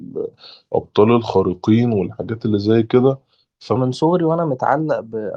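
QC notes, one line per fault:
0.00–3.76 s, section at the wrong speed: speech plays at 0.85x, slow and roughly three semitones low, likely from being clocked at the wrong rate.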